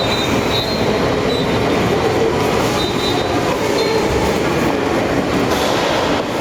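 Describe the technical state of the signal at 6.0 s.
At 6.0 s the gain is pulled down by around 10 dB under each loud event, squashing the sound, the gain pumping heard throughout the clip, likely from a fast limiter fighting excessive input gain.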